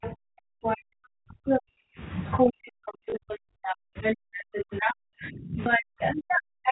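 A speech recording in which the talker's voice sinks by as much as about 40 dB from 0 to 2.0 s and again from 2.43 s to the end, in the way an echo canceller likely behaves when it meets speech suppressed in double talk, pulling down both voices because it cannot tell the near talker from its own loudspeaker echo. Over this, the other side's voice leaking through is heard as a second voice at 0.02 to 0.14 s, 0.63 to 0.78 s, 1.46 to 1.61 s and 2.24 to 2.53 s, then steadily from 2.86 s on. It arrives at about the talker's level at first, then about 10 to 15 dB louder, likely residual echo the canceller failed to remove. At 3.1 s and 5.64 s a small blip marks packet loss with last packet repeated, one 20 ms packet replayed each time.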